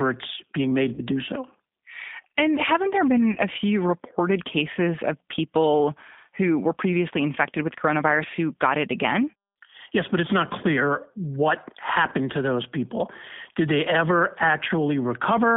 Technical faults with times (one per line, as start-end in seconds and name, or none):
0.00-15.56 G.729 codec
0.94-1.01 VoIP packet loss concealed by the speech codec
3.32-3.40 VoIP packet loss concealed by the speech codec